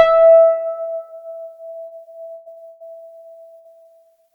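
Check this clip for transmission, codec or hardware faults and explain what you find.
The clip has two kinds of network fault, clustered between roughly 1.9 and 3.9 s of the music.

Short stalls from a late packet occur at 1.87–2.02 s, 2.52–2.59 s and 3.83–3.88 s. Each time a packet arrived late, the jitter buffer emptied and the receiver stretched the last sound for 36, 45 and 21 ms respectively. Nothing is lost, but the music briefly hangs with a slight buzz or dip before continuing from the same point.

Bursts of packet loss occur at 2.34–2.49 s, 2.68–2.83 s and 3.58–3.68 s, removing about 120, 120 and 60 ms of audio. The receiver extended the last sound and faded it down across each gap, giving a held buzz or fading hiss. The music then resumes further on, with that stretch missing.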